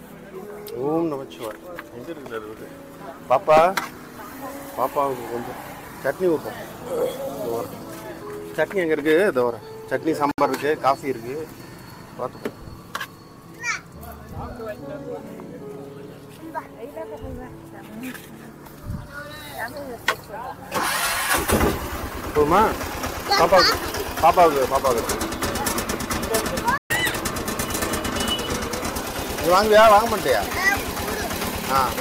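At 10.31 s a gap at a join of encoded pieces opens a silence of about 69 ms. Separately encoded segments were butted together with their encoder delay and end padding left in. On a waveform it is a flat notch with slightly smeared edges; on a spectrogram, a thin vertical blank band.

From 26.78 to 26.90 s a playback stall drops the output to silence for about 124 ms, most likely because the player's buffer ran dry or its thread was blocked. The sound halts abruptly, then resumes, showing as a wider empty column in the spectrogram.

From 26.90 to 27.15 s comes catch-up at higher speed: the player resamples its backlog at 1.5 times normal rate, so the sound runs faster and about seven semitones higher before snapping back. Spectrogram harmonics jump upward and spread apart, and waveform periods visibly compress.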